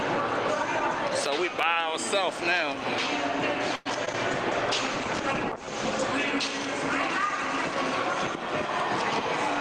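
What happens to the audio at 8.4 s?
Nothing goes wrong at 8.4 s; the audio plays through that moment intact, with no dropout, click, glitch or other fault to be heard.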